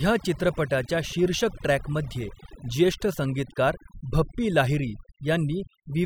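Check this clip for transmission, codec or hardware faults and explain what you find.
One fault runs through the whole clip: overdone noise removal. From start to finish the pauses collapse into near silence dotted with twinkling specks. A noise reduction stage set far too aggressively is the cause: each frequency band that sits close to the estimated noise level gets pulled down or switched off, so the quieter parts of the speech are removed along with the noise, leaving isolated flickering remnants behind.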